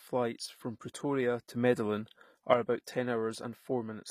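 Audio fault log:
throughout: HE-AAC compression, likely, with plainly audible codec damage fitting about 24 kbps; treble is rebuilt from copied lower bands, so s sounds turn gritty, metallic or lispy.
1.55–2.54 s: sudden gain jump; speech and background noise step up together by about 6 dB, then back down, likely from a gain change applied without a ramp.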